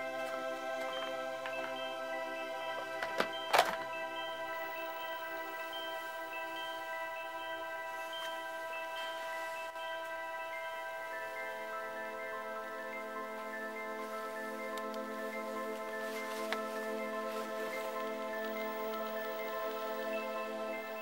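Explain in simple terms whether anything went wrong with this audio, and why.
One thing went wrong, and it is very brief. From 9.70 to 9.76 seconds, the sound suddenly gets quieter for about a twentieth of a second, then comes straight back. This is a case of one channel drops out. The recording had a left and a right side. For that moment, one side was most likely lost. So the overall level dipped until it returned.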